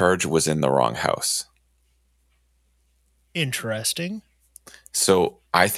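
No technical faults are audible.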